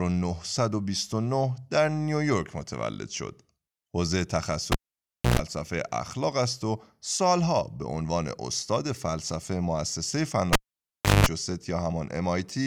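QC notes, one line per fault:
4.72–5.39 s, cable pulled and plugged in: a pop as the live lead comes out, then roughly 0.62 s of near silence. Next comes a 0.12 s burst of 60 Hz mains buzz while only the plug tip makes contact, and a second pop as the full connection restores the signal.
10.53–11.27 s, cable pulled and plugged in: the same sequence with a longer dropout of about 0.69 s and a 0.19 s buzz burst at 50 Hz. The ungrounded tip picks up hum before the sleeve seats, and the reconnection pops as the sound returns.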